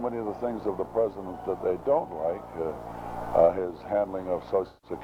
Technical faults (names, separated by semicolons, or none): AAC frame loss with concealment